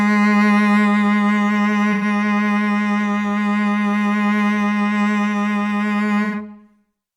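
A brief smeared patch interrupts the music at 1.93 to 2.04 s and again at 6.24 to 6.36 s. Both are AAC frame loss with concealment. About 85 ms went missing each time, consistent with two lost frames, and the decoder filled each gap from the last good spectrum.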